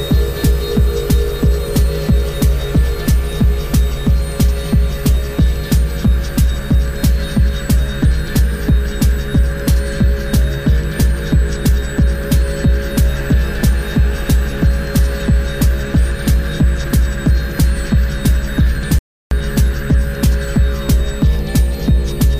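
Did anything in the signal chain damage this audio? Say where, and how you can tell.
Yes. There is a playback stall at the playback stage. The sound cuts to silence mid-flow at 18.99 s and resumes at 19.31 s, a gap of about 0.33 s. The likely cause is the player running dry of buffered data or its thread being blocked until output recovered.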